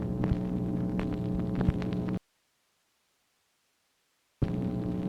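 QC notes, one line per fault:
2.17–4.42 s, audio dropout to a faint residue: the sound cuts off abruptly mid-flow for about 2.2 s, leaving only a low hiss roughly 45 dB below the signal, then snaps back. The signal was likely lost upstream while the path after the break stayed live.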